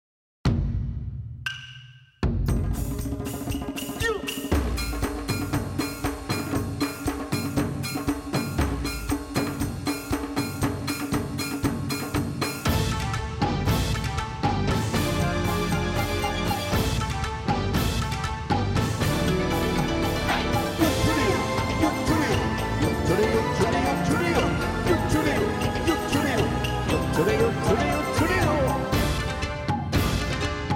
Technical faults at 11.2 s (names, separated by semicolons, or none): none